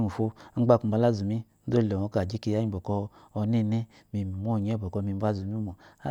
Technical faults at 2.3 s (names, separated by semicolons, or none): none